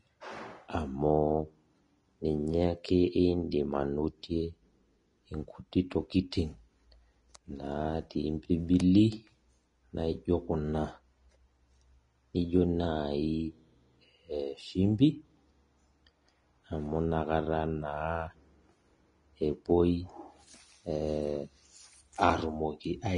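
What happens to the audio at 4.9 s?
At 4.9 s, as across the whole clip, the speech has likely been through Vorbis compression at a low setting, consistent with roughly 30 kbps. Nothing survives above 10.6 kHz, and the coarsely quantised treble turns into grainy hiss, roughening tones and softening consonant attacks.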